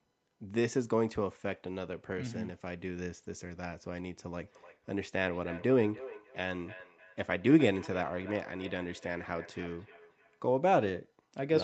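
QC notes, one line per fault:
4.45–10.57 s, feedback echo between two devices: each word returns roughly every third of a second, thinner each pass and about 17 dB down; the spectrogram shows faint, evenly spaced ghost copies.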